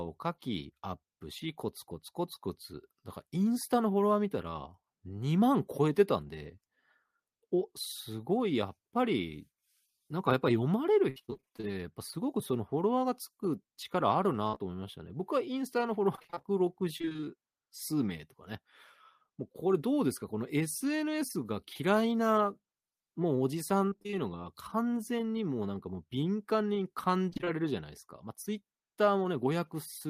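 From 11.09 to 11.65 s there's repeated packet loss, a robotic, choppy patch: the receiver keeps patching holes by extending the last sound, covering about half that stretch. At 14.47 s a burst of packet loss, about 60 ms, turns into a fading held sound before the speech jumps ahead. Right behind it, at 14.55 and 14.58 s, two short concealed packet losses of about 20 ms each add quick smears. The same robotic choppiness returns at 16.16 to 17.26 s, 23.86 to 24.15 s and 27.29 to 27.58 s, with longest gaps of roughly 20 ms each.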